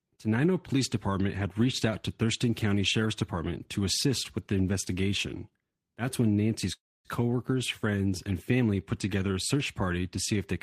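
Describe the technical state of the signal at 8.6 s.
At 8.6 s the speech signal is intact, with no audible fault at that moment.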